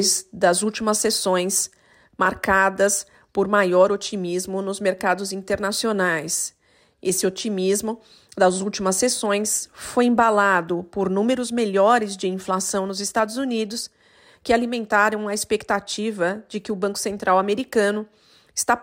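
No technical fault can be heard anywhere in the recording: the signal stays continuous and steady in level and timing, with nothing in the audio path disturbing it.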